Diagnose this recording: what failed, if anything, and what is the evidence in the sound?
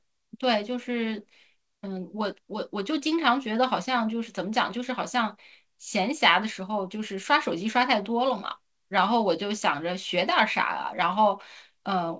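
Nothing failed in this recording, and the sound holds no evidence of a fault.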